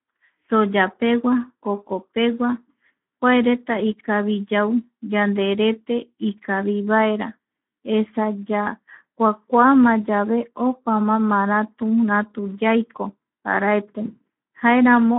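Throughout the whole clip the speech carries Speex codec damage, plainly audible as a hoarse, noisy grain on every voiced stretch. The roughness fits a bitrate around 11 kbps, where the excitation gets too few bits to rebuild the voice's fine structure. The sound is also held to a telephone line band of about 150 Hz to 3.4 kHz, with nothing above 3.8 kHz. That distinguishes it from plain band-limiting, which narrows the sound but leaves it clean rather than rasping.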